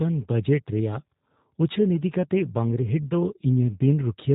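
G.729 codec coloration runs throughout the speech, with a rough, slightly synthetic quality and nothing above 4 kHz. The sound points to G.729A at 8 kbit/s, which rebuilds each 10 ms frame from a vocal tract model, pitch prediction and sparse pulses.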